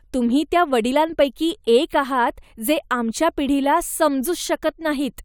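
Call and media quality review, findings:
No findings: the call and media quality review turned up nothing to report.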